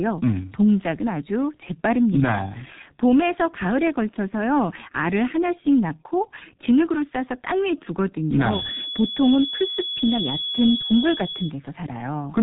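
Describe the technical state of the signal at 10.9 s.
At 10.9 s the speech sounds muffled and hoarse, with smeared consonants and no brightness at all. Nothing reaches above about 3.8 kHz. This is G.723.1 codec damage, heavy throughout the clip. The codec works in coarse 30 ms frames and updates its model of the voice only slowly, so fast detail is lost. The thinness points to a very low rate, in the region of 6.3 kbit/s.

Over that, a thin, steady whistle at 3.4 kHz sits roughly 10 dB below the speech and swells and fades slowly in level. It runs from 8.42 s to 11.56 s, so it is still sounding at 10.9 s. This feedback whistle is likely caused by a loudspeaker-to-microphone loop balanced right at the edge of feedback. One frequency keeps ringing at that edge without building up into a howl.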